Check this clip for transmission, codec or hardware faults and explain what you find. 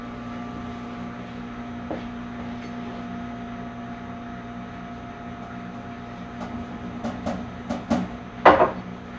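Nothing in the audio points to a transmission, codec or hardware problem: the signal holds together steadily throughout, with no audible interruptions, distortion or damage.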